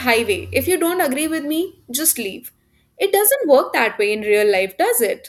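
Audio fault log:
No faults heard in this recording.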